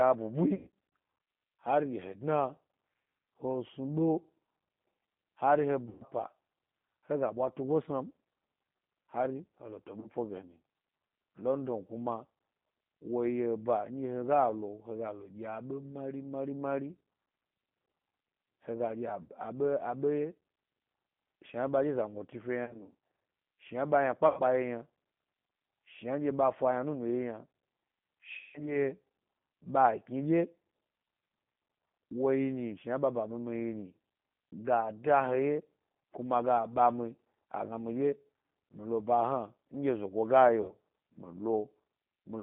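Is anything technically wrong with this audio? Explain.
Yes. The speech has passed through the G.729 codec, which fits an 8 kbit/s stream. It sounds rough and synthetic, confined to roughly 150 Hz to 3.6 kHz, and a spectrogram shows an empty band above 3.6 kHz.

VoIP packet loss concealed by the speech codec occurs at 0.55, 5.89 (just after "hari he"), 10.0, 19.23, 22.65, 24.28, 28.39 and 40.62 s. The gaps range from 30 to 150 ms, and the decoder stretches the last sound into a fading buzzy tone or coloured noise. The waveform shows smeared, decaying segments.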